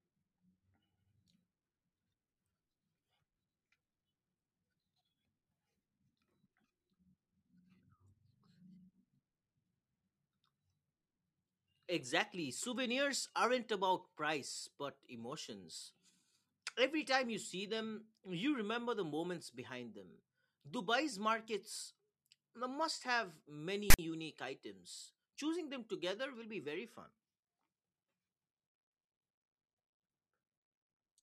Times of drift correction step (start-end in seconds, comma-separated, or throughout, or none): none